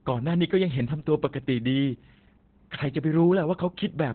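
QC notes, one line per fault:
Throughout: Opus voice compression. The speech has been through Opus running its SILK linear-prediction coder in narrowband mode. This fits a rate of about 8 kbps in 20 ms frames. At that rate the encoder discards everything above roughly 4.3 kHz and quantises the excitation coarsely. The result is muffled, telephone-like speech with no sibilant crispness, plus a hoarse, buzzy grain and a faintly robotic edge. All of this comes from heavy codec damage.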